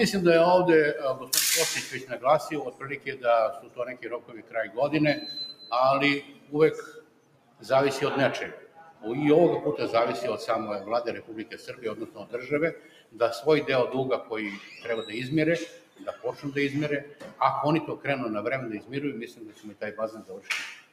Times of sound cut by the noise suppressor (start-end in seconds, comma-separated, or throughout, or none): 1.15-4.78, 6.21-7.64, 8.57-9.04, 11.22-13.20, 14.23-14.68, 15.68-20.93